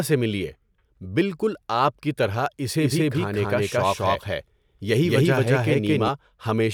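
A speech clip with a doubled audio track from 2.81 to 6.09 s, right after "بالکل آپ کی طرح": a same-level copy trails by about a fifth of a second, likely from a second, slower capture path.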